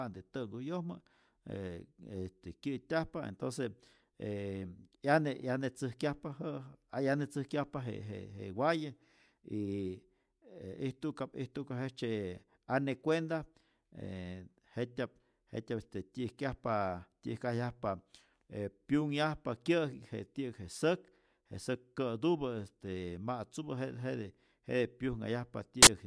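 At 25.83 to 25.87 s, file tags played as audio: an embedded cover picture's compressed bytes are read as samples, giving a sharp burst of very loud white noise. The waveform shows a solid block with hard edges; the spectrogram, a flat broadband slab.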